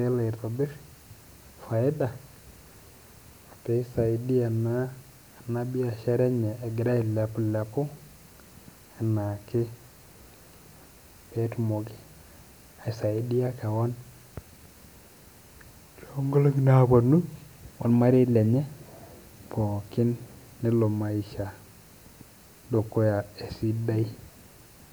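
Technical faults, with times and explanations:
No technical faults can be heard anywhere in this speech recording.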